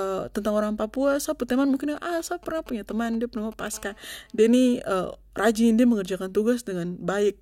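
From 1.96 to 3.63 s, GSM signalling bursts break in. A nearby 2G phone sends short groups of radio bursts, and the audio circuit rectifies them. They gallop as dit-dit-dit ticks and brief 217 Hz buzzes. They sit roughly 25 dB below the speech.

From 3.74 to 4.56 s, GSM phone buzz takes over. The phone is now in a call and transmits steadily at 217 bursts per second. The rectified pulses give a hard, raspy 217 Hz buzz full of harmonics. It is about 31 dB below the speech.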